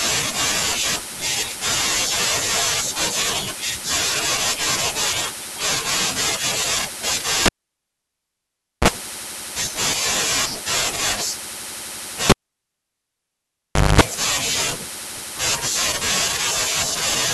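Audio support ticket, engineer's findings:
Cable pulled and plugged in, 7.46–8.88 s and 12.30–14.01 s. Pop, near-silence (1.37 s, 1.66 s), then 60 Hz buzz (36 ms) and 50 Hz buzz (233 ms) as the tip touches, then a second pop. The bracketing pops and mains buzz distinguish it from a plain dropout. Probable component: cable pulled from its jack and reinserted.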